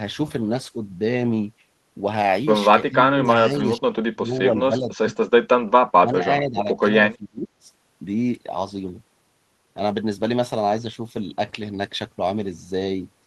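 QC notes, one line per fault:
2.89–5.15 s, speech suppressed in double talk: the voice repeatedly sinks and thins, at worst by around 25 dB, for about a second in total across this stretch. The likely cause is an echo canceller treating overlapping far-end talk as echo and turning both down.
5.94–6.22 s, speech suppressed in double talk: a brief hole opens in the voice, dropping by around 25 dB for roughly a third of a second. This is likely the canceller ducking the talker while the other side speaks at once.
6.4–6.84 s, speech suppressed in double talk: a milder dip of around 10 dB lasts roughly a third of a second, leaving the voice quieter and duller. Overlapping talk likely made the canceller attenuate the near-end signal along with the echo.
7.16–7.68 s, speech suppressed in double talk: the voice drops out in pieces by around 25 dB for nearly half a second. This is likely the echo canceller failing to separate the local talker from loudspeaker echo during simultaneous speech.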